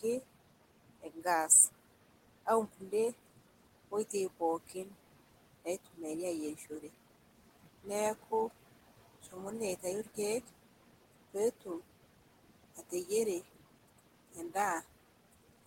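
Noise suppressor artifacts run through the whole recording: the suppressor pulls the room noise down by about 17 dB in bands it judges steady, frame by frame, so the background, sitting about 15 dB under the speech, dips between phrases and swells beneath them.

Speech cut by the noise suppressor occurs from 0.00 to 1.25 s, 2.46 to 2.92 s, 3.91 to 6.90 s, 7.83 to 11.81 s, and 12.76 s to the end. Mistaking quiet speech energy for noise, the suppressor turns it down by about 13 to 17 dB, so brief stretches, from a tenth of a second to several tenths per span, sound swallowed and faint.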